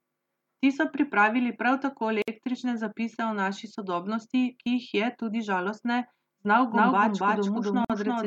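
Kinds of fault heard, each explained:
Gap at a join of encoded pieces: at 2.22 s and again at 7.85 s the speech drops into silence for about 56 ms and then 50 ms, with edges smeared by the codec, before resuming exactly where it left off. That fits separately encoded pieces joined untrimmed, the encoder's start-up delay and last-frame padding left in. Unlike a dropout that loses material, nothing is skipped; the sound simply pauses and continues.
Doubled audio track: from 6.72 s to the end, a second copy of the speech runs roughly 300 ms behind the first at about the same level. It is full-band and dry, with no decay or room colouring, and it begins abruptly. That points to a likely second capture by a slower path or an edit holding two copies out of step. A reverb or room echo would fade and sound coloured; this copy stays at full strength and clean.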